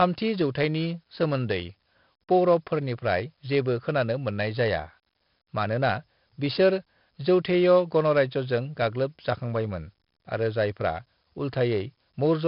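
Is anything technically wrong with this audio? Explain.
Yes. The whole speech clip has heavy 4-bit ADPCM compression: coarse predicted steps put gritty hiss on loud syllables and crunch on attacks, and nothing comes through above 5.3 kHz, which fits about 44 kbps.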